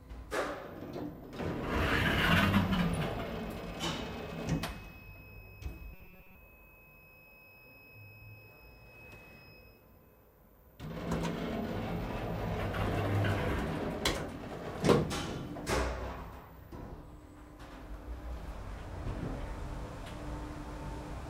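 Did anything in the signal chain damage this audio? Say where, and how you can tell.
Yes, at the driver or buffer stage: from 5.93 to 6.35 s the sound turns into a rigid, metallic robotic buzz at 188 Hz, likely from repeated short buffers. Starved audio was padded by replaying a roughly 5.3 ms block for most of that stretch. A spectrogram shows evenly spaced harmonics; the waveform shows identical repeating cycles.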